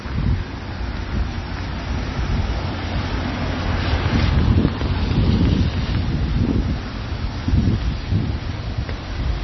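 A starved encoder, likely MP3 compression at a very low bitrate around 24 kbps, has degraded this everyday-sound recording for its whole length. With so few bits, the encoder cuts all treble above about 5.9 kHz, so the sound is dull and boxed-in. It also discards quieter frequency detail, and because what it keeps changes from one frame to the next, the result is heavily watery and swirling throughout.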